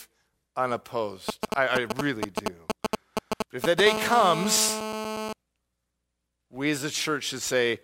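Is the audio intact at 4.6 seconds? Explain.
No. From 3.87 to 5.33 s a GSM phone buzz sits about 5 dB below the speech: a nearby 2G phone on a call pulses at 217 Hz, and the audio circuit rectifies those bursts into a steady, raspy tone, far harsher and higher than smooth 50 or 60 Hz mains hum.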